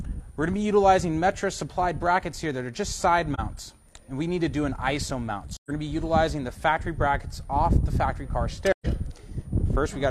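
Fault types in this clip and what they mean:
Switching supply whistle: A thin, high whistle runs through the whole clip. It sits far below the main sound, and its pitch wanders between about 9.0 and 9.3 kHz rather than holding steady. A switching power supply in the chain is cycling at an audible rate, in burst mode or beating against another supply, and its pitch shifts as the load on it changes.
AAC frame loss with muting: The sound softly ducks out and returns three times, at 3.34–3.40 s, 5.53–5.71 s and 8.72–8.86 s, with smooth edges. The first gap is about 42.7 ms, which fits a single lost AAC frame. The other two are about 128 ms, consistent with three consecutive frames. The decoder zeroed the missing spectrum, and the overlapping windows faded the audio out and back in around each hole.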